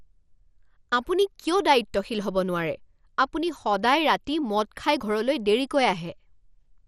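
Across the speech the sound is dull, gurgling and grainy, with nothing above 14.3 kHz. This is likely MP2 compression, which fits a rate around 64 kbps: starved sub-bands are coarsely quantised or switched off. A spectrogram shows a hard ceiling and flickering upper bands.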